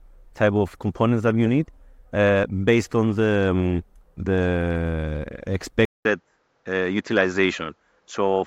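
At 5.85 s the speech cuts out for 200 ms, then returns duller and band-limited, with nothing above 7.6 kHz, until the end. The likely cause is the input switched to a poorer device, bringing a faint new background noise well below the speech and no real change in level.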